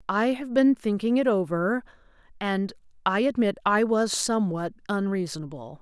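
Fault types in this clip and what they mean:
No faults can be heard anywhere in the recording.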